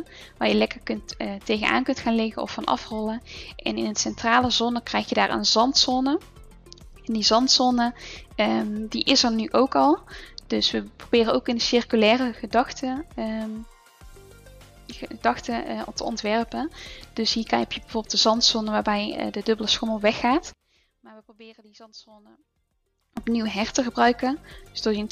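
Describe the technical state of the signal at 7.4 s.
At 7.4 s the signal is intact, with no audible fault at that point.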